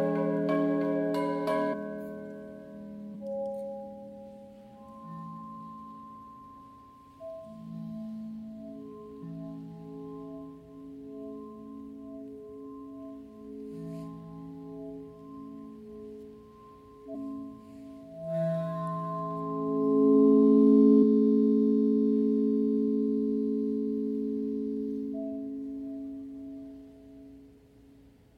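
Damaged data in a compressed stream causes three brief blips, at 1.72 to 1.74 s, 17.14 to 17.16 s and 21.02 to 21.04 s. Corrupted bytes make the decoder misread frames and lose sync. Each lasts about 20 ms and sounds like a chirp, squawk, click or short hole.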